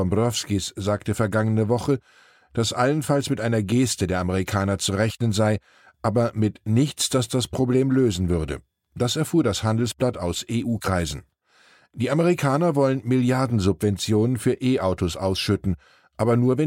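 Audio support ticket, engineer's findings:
Nothing to flag on this one: listened to the whole speech recording and found no faults to log.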